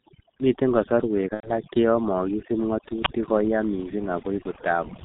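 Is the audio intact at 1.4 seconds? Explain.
No. From 1.34 to 1.52 s there is VoIP packet loss concealed by the speech codec. About 90 ms of audio went missing, which fits three lost 30 ms frames, and the decoder filled the hole by repeating its last pitch and filter settings at a falling gain. The result is a brief stretched sound that decays, muted from the third lost frame. Because each rebuilt frame depends on the one before, the sound stays weak and distorted for a short while after real data resumes. On a spectrogram this shows as concealed energy running flat and fading, with no normal variation. In the waveform it appears as a shrinking pattern.

The moment is also affected by two faults that run through the whole clip. Overdone noise removal pulls individual frequency bands down whenever they sit near the noise estimate, taking quieter parts of the speech with them. The pauses fall to near silence with twinkling specks. 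A spectrogram shows a blank background dotted with isolated bright flecks and ragged, hollowed-out speech energy.

The G.723.1 codec, with heavy damage that fits its 6.3 kbit/s mode, cuts everything above 4 kHz and adapts slowly. Speech sounds muffled and hoarse, with smeared consonants. A spectrogram shows a hard ceiling at 4 kHz and blurred transitions.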